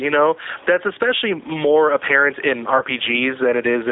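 A short speech recording with three problems stacked on top of each other. First, there's gain pumping all the way through. The level keeps lurching, a swing of about 10 dB, over faint room noise normally about 35 dB under the speech. The likely cause is input gain set far too high, with a fast limiter or compressor clamping each loud moment, so everything sounds squashed and the soft and loud parts end up oddly close in level. Second, the whole clip has the sound of the G.729 codec, specifically the G.729A flavour. The band is cut to roughly 300 Hz to 3.7 kHz, so it has that thin telephone quality, and the codec damage is plainly audible. The speech comes out slightly rough and synthetic because the decoder rebuilds it from a filter, a pitch predictor and a handful of pulses rather than carrying the actual waveform, which fits an 8 kbit/s stream. Third, from about 2.78 to 2.83 s there's a glitch from VoIP packet loss concealed by the speech codec. 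About 20 ms of audio went missing, which fits a single lost packet, and the decoder covered the gap by stretching its last pitch and filter into a brief fading fill. The sound stays a bit weak and smeared for a moment afterwards while the decoder's state catches up.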